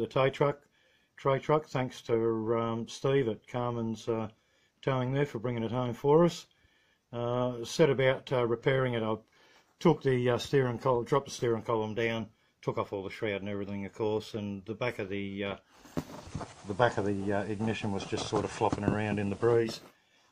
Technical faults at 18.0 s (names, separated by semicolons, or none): digital radio blending to analogue